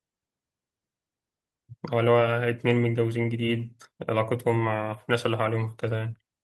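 No technical faults can be heard anywhere in the speech recording. There is nothing to place on a timeline.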